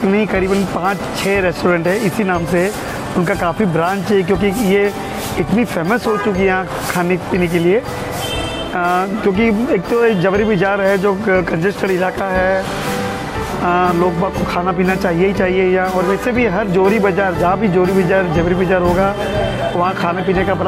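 Nothing in the audio stood out as a technical problem on listening.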